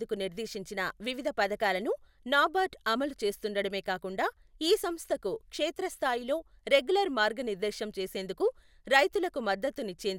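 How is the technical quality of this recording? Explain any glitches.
No glitches can be heard here: the speech signal comes through continuous and intact, with no dropouts, clicks, distortion or other transmission problems at any point.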